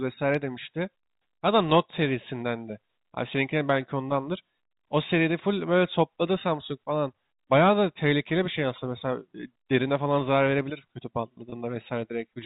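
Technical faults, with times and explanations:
11.50–11.52 s, packet loss with pitch repetition: 20 ms lost, bridged by looping the last pitch period, a brief buzzy hold; waveform shows identical cycles.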